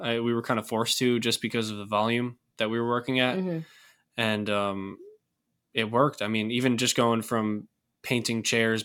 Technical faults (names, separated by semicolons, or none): none